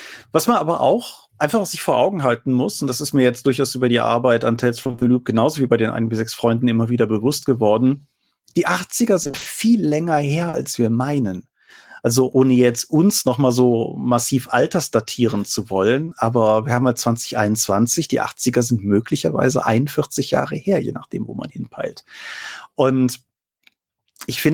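Speech, with two kinds of network damage. Repeated packet loss (robotic sound) hits 4.83–5.03 s and 9.23–9.47 s. In each stretch a string of 20 ms holes (five, then six) comes so close together that half the span is concealed sound rather than real audio. The receiver keeps re-synthesising the last fragment, so the speech turns choppy, with pieces missing, instead of just blurring once. Short concealed packet loss is different: it is isolated. At 10.49 s, just before "wir meinen", a 40 ms gap is patched by extending the preceding sound, giving a brief smear. At 16.05 s and 16.09 s, between "so massiv altersdatieren zu" and "aber wir haben halt", two back-to-back 20 ms gaps leave a brief smear or wobble, with no sustained robotic texture.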